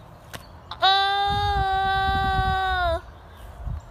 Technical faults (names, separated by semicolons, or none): none